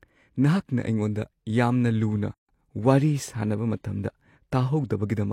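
At 2.34 s the speech drops out for about 145 ms, to 2.49 s, then resumes right where it stopped. That's a gap at a join of encoded pieces: untrimmed encoder delay and end padding left silence between separately encoded chunks, with smeared edges.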